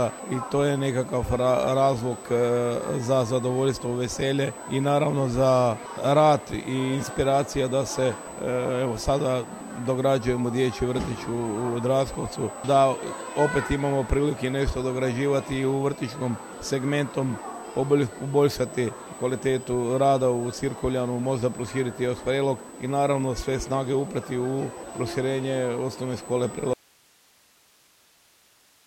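A steady, high 8 kHz whine runs through the whole clip, sitting roughly 25 dB below the sound itself. This is USB whine: current drawn in the bus's 125-microsecond microframes leaks into the audio through the power or ground, fixing the tone at 8 kHz.

At 26.73 s the sound cuts off abruptly and never returns; only faint hiss, roughly 35 dB down, remains. This audio dropout to a faint residue likely means the wanted signal was lost while the path after the break stayed live.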